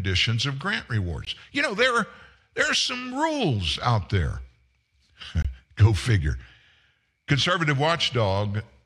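At 1.25 s and again from 5.42 to 5.45 s, the speech drops out briefly: gaps at the join of encoded pieces, about 19 ms and 23 ms long. Separately encoded segments were spliced without trimming encoder delay and end padding, leaving short silences with smeared edges before the speech resumes.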